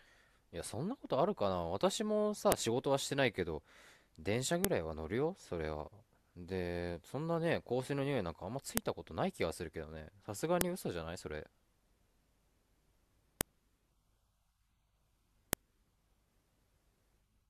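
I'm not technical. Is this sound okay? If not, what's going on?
No. Sharp snaps at 2.52, 4.65, 8.77, 10.61, 13.41 and 15.53 seconds are a file header played as audio. Each piece's header bytes are heard as a click, regardless of the speech.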